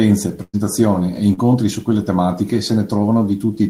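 From 0.43 to 0.55 s a burst of packet loss cuts out about 100 ms of the speech. The receiver holds the last sound and lets it fade, so a sustained buzz or hiss decays audibly before the talker resumes further on, which is longer than a brief smear.

At 1.33 to 1.39 s, just before "su quelle tematiche", a short concealed packet loss covers about 40 ms. The decoder extends the preceding sound and blends back in quickly, leaving only a brief smear or wobble rather than an audible fade.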